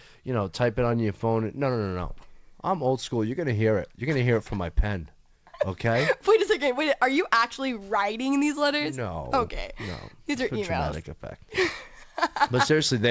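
No faults: the speech comes through a call path whose audio stops at 8 kHz, consistent with a wideband codec such as G.722.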